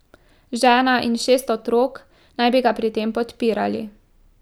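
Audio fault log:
Nothing to flag here; the speech comes across without any audible faults anywhere in the clip.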